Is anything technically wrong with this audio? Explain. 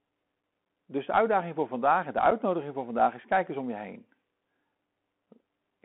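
Yes. The speech sounds boxed-in and thin throughout, with scratchy, gritty s sounds, loud bright syllables that break up, and a grainy hiss beneath the speech. This is the Bluetooth CVSD headset codec. The audio is confined to roughly 200 Hz to 3.5 kHz, which points to a 64 kbps CVSD link. CVSD codes each sample as a single up-or-down step whose size adapts. Fast, loud high-frequency movement outruns the step and distorts, while the constant stepping leaves the granular noise floor.

Two brief, hard-edged dropouts also interrupt the speech, one at 0.65 s lasting about 11 ms and one at 2.31 s lasting about 7.5 ms. The second falls just after "voor vandaag en de" and just before "voor vandaag is kijk". These are unconcealed Bluetooth headset packet losses. A few voice packets between headset and phone went missing and were replaced by silence or an idle pattern rather than being smoothed over, so each gap has an abrupt edge.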